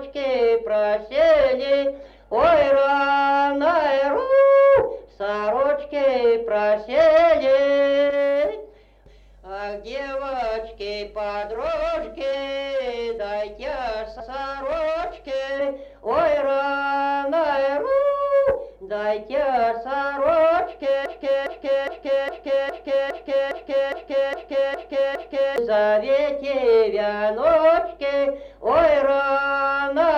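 A stall in the player, encoder or stream likely left it resending the last fragment it held, producing a broken-record loop from 21.06 to 25.58 s: a 0.41 s piece repeats exactly, back to back, eleven times, and the audio meant for that stretch is lost.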